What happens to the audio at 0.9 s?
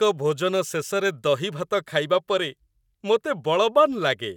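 Nothing goes wrong at 0.9 s; the speech plays through that moment intact, with no dropout, click or distortion.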